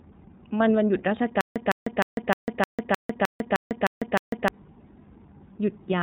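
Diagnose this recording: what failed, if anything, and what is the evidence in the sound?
The codec stage failed, and the damage runs through the whole clip. This is iLBC codec damage, and it is plainly audible. The speech is band-limited, with nothing above 4 kHz. It has a rough, slightly synthetic edge. iLBC codes each frame's excitation on its own, without using the previous frame. The character fits its 30 ms frame mode at about 13.33 kbps. Fine detail and natural smoothness are lost.

From 1.41 s to 4.48 s there is a stutter with silent gaps. A burst of about 158 ms plays, then about 149 ms of digital silence follows. The cycle repeats every 307 ms or so, ten times. The stage is likely playback or stream buffering. A stalled player would replay its last fragment on each retry and then run empty. The audio that belonged in that span never plays.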